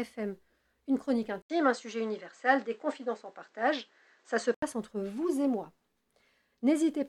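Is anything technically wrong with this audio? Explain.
Yes. From 1.42 s to 4.62 s the sound turns dull, with nothing above 8.2 kHz, a faint new noise floor well below the signal, and an 80 ms gap at the switch, while the level holds steady. This is likely an input switched to a poorer device with a narrower band.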